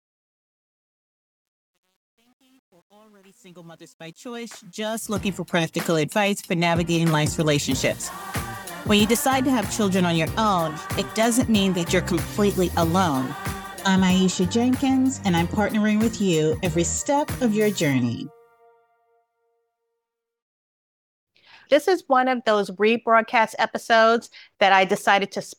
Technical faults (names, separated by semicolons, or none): truncation distortion on a fade